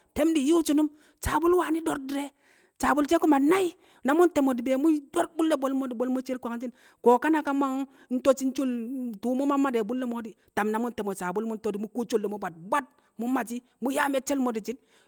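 A recording of speech with no technical fault to be heard anywhere in the signal.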